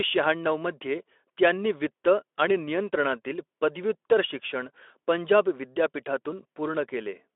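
No technical faults are audible.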